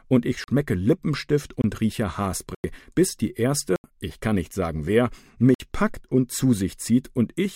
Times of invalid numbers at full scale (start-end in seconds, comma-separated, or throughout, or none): none